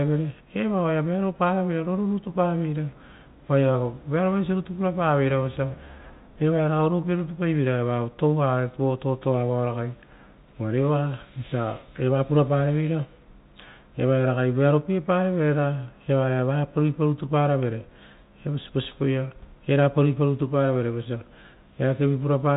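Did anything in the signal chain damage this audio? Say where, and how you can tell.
No, nothing in the chain damaged this speech.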